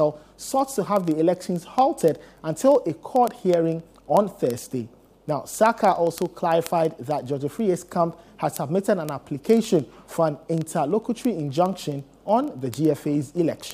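From 0.11 s to 13.71 s, the sound carries a continuous train of word clock ticks, sharp clicks at a steady rate of about one every 40 ms, several hundred in all. The receiving device is free-running rather than locked to the sender's clock, which points to a mismatch of several hundred parts per million. Each slip drops or repeats a single sample, and the clicks are of uneven strength. Buffer underruns would instead leave audible gaps at irregular times.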